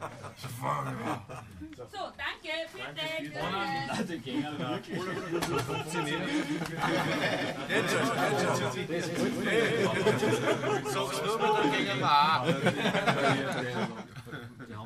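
Sample clock jitter runs through the whole clip. The converter's timing wobbles by a few microseconds, so the sampling error grows on steep waveform slopes and leaves a roughness about 35 dB below the signal. On a spectrogram it shows as a diffuse haze that follows loud, bright passages and disappears in silence.

From 5.05 s to 12.01 s a doubled audio track appears: a full-band copy about 150 ms late and roughly 5 dB quieter, likely from a second, slower capture path. The waveform shows repeated envelopes with hard edges at both ends, and the spectrogram shows dry, uncoloured echoes.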